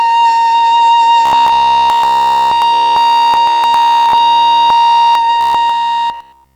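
Robotic sound from repeated short buffers runs from 1.26 to 5.15 s and again from 5.41 to 6.55 s. Through both stretches the music collapses into a stiff, metallic buzz pitched at about 66.7 Hz, a repeat roughly every 15 ms. The likely cause is fresh audio arriving too seldom, so the same short slice loops in place of the missing material. Within those stretches essentially all the sound is this recycled fragment.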